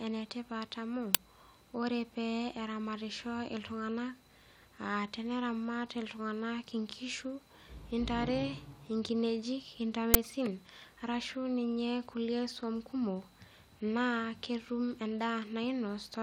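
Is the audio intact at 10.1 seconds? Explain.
No. At 10.14 s there is an uninitialised buffer: a block of about 10 ms played before audio was written into it, so leftover memory came out as samples. It sounds like a sharp, loud digital crackle. On a waveform it shows as a brief large spike, and on a spectrogram as a thin vertical broadband stripe.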